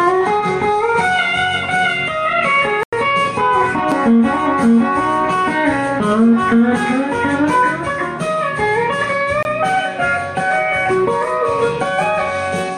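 Block of digital silence at 2.83 s and 9.43 s: the output buffer likely went unfilled, dropping the sound abruptly to silence for 93 ms, then 23 ms, which fits 4096- and 1024-sample buffers. The first is heard as a short hole, the second as a shorter gap.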